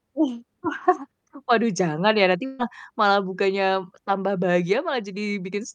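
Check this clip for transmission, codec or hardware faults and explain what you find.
One transmission fault is present in this speech clip: a burst of packet loss from 2.45 to 2.61 s. Several packets in a row never arrived in time to be played. The receiver filled the hole by extending the last received sound for about 135 ms, fading it down as the gap continued. There is no silence. Instead, a held, decaying stretch replaces the real audio. Speech then resumes about 140 ms further on, with that portion missing.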